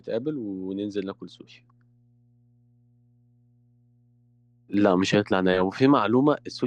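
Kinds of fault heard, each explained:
Mains hum: A steady, low tone sits under the speech for the whole clip, pitched at 60 Hz and roughly 35 dB below the speech level. Power-line energy has leaked into the signal path, as happens when a ground loop forms between connected equipment or when a transformer sits close to a cable or input stage, and the 60 Hz pitch points to a 60 Hz mains supply.
Sudden gain jump: At 4.74 s the level steps up abruptly by 6 dB and stays there to the end of the clip, with the speech and the background noise getting louder together rather than the speaker simply talking louder. That shared, instantaneous rise is the signature of a digital gain change landing between one sample and the next, likely a level setting or a one-bit shift applied without any ramp to smooth the transition.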